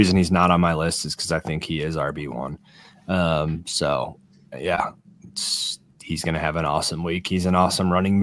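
No dropouts, clicks, distortion or level jumps are audible anywhere in the recording; nothing to flag.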